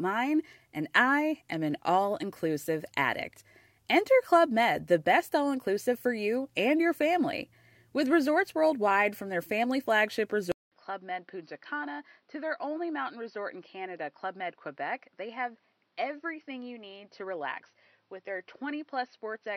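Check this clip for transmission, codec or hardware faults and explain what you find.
One fault: at 10.52 s the input likely switched to a poorer device, and it stays that way to the end. After a 200 ms gap, the speech loses everything above 5.9 kHz, drops roughly 10 dB and picks up its own faint background noise. A codec bandwidth drop would not shift level or noise.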